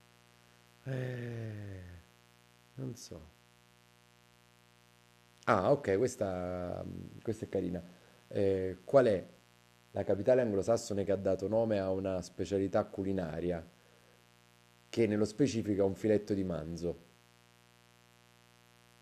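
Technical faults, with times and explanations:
Throughout, mains buzz: a steady, raspy 60 Hz buzz sits under the speech the whole way, roughly 30 dB below it. Something like a dimmer, rectifier or unshielded cable is letting sharp switching spikes in twice per mains cycle, at 120 per second. Those spikes carry a long ladder of 60 Hz harmonics up into the kilohertz range, which gives it that edgy, gritty texture rather than a smooth hum.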